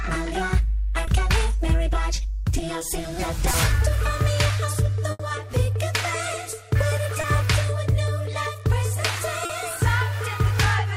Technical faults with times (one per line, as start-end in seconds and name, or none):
1.05-1.09 short concealed packet loss
3.51-3.55 short concealed packet loss
5.11-5.21 burst of packet loss
7.21-7.25 short concealed packet loss
9.45-9.51 short concealed packet loss